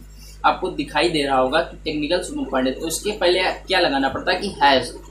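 A steady 50 Hz mains hum runs through the whole recording, roughly 20 dB below the wanted signal, from power-line interference coupled in through a ground loop or a nearby transformer.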